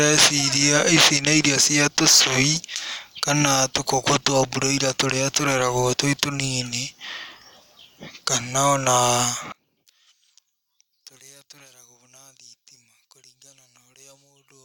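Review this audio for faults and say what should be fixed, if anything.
From 9.52 s to the end at 14.64 s, one stereo channel has likely been inverted in polarity, so the content common to both sides cancels when they are summed to mono. The speech drops by about 28 dB, leaving only a faint residue. Checking polarity on each channel and monitoring a mono fold-down before delivery would catch this.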